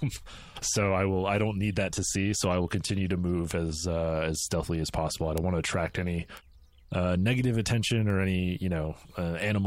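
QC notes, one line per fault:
3.51 s, 5.38 s, 6.37 s and 8.10 s, bit error spike: four isolated sharp ticks, the first just after "will continue to move", the third after "want to attract any" and the last after "uh negative attention". Each is broadband and unrelated to the speech, peaking at about -13, -7, -19 and -26 dBFS. A flipped bit makes a sample jump by a power of two and snap straight back. Their sub-millisecond length suggests one corrupted sample, or a few in a row at 3.51 s.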